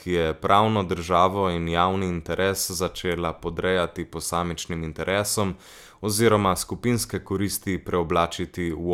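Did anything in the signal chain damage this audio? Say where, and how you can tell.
No, no signal-chain damage audible.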